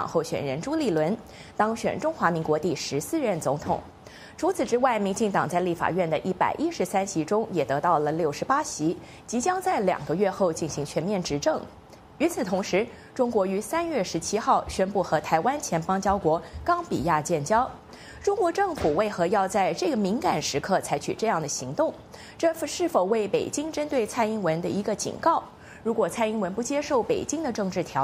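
No technical faults are audible.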